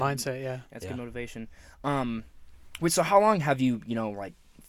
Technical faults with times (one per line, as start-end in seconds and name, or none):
none